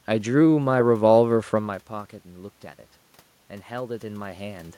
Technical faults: automatic gain rising

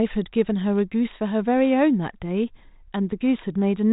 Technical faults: none

